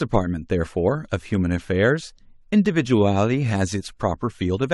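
Speech recording with no audible technical faults.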